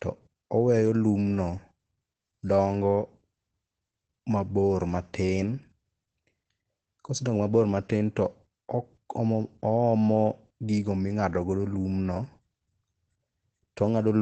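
Opus voice compression runs through the whole clip. The encoder appears to be in its SILK linear-prediction mode at wideband, and nothing is present above 8.5 kHz, which fits a low bitrate of around 12 kb/s with 20 ms frames. Coding the excitation this coarsely leaves the speech plainly damaged: dull and muffled at the top, with a hoarse, slightly robotic edge where the codec approximates the vocal source rather than reproducing it.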